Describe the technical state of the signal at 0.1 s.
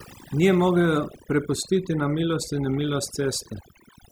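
At 0.1 s the signal shows overdone noise removal, present throughout the clip. A noise reduction stage set far too aggressively is cutting individual frequency bands near its noise estimate, so the background drops and breaks up into twinkling specks.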